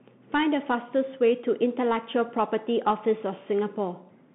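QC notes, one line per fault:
Throughout, Bluetooth CVSD headset codec: the speech passed through a narrowband headset link that codes each sample as a single up-or-down bit with an adapting step, which fits a 64 kbps CVSD stream. The band is held to about 150 Hz to 3.5 kHz, with nothing above 3.8 kHz, so the sound is thin and muffled. Where the level climbs steeply the step cannot keep up, giving plainly audible distortion, scratchy s sounds and a granular hiss beneath.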